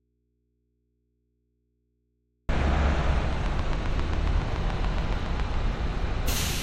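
The clip contains everyday sounds. Throughout, nothing is present above 16.5 kHz, and smeared, swirly coding artefacts sit on the sound. This is likely low-bitrate audio saved at a high bitrate. The sound points to a 64 kbit/s MP3 later re-encoded at 320 kbit/s, which cannot restore the lost detail. From the very start to 2.49 s there is an audio dropout to a faint residue. Only mains hum remains, around 50 dB below the normal level. The sound then cuts in abruptly, not as a fade. The likely cause is a lost signal feeding a live, open input. From 3.33 s to 5.55 s a train of clicks runs over the sound. There are about fifteen sharp, similar pops, evenly spaced at 7.23 per second. Their peaks stand around 10 dB above the signal. Nearby equipment interference or a faulty connection or power supply is the likely source.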